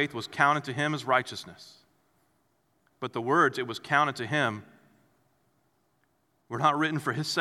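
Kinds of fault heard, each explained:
Nothing here stands out as a fault; I didn't catch any glitches or problems worth flagging in this bit of speech.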